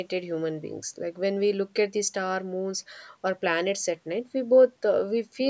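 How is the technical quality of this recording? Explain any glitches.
No glitches can be heard anywhere in this speech recording. It has passed through normal call microphone processing, so the lowest bass is trimmed away and nothing reaches above 8 kHz.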